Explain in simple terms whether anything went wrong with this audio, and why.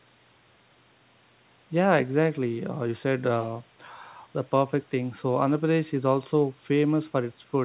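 Nothing went wrong here; the speech contains no faults.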